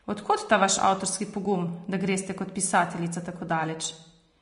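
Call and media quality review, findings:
Vorbis compression, whole clip. Speech hissy and grainy, consonant onsets smeared, sibilants roughened into noise. Nothing above 10.6 kHz. Likely cause: low-quality Vorbis encode in the media path, damage plainly audible, which fits a bitrate near 37 kbps. Encoder dropped the top band and quantised the remaining treble so coarsely that fine detail was replaced by noise of similar energy.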